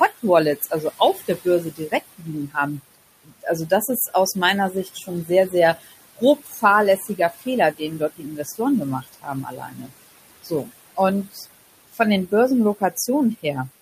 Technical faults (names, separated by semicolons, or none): noise suppressor artifacts; speech cut by the noise suppressor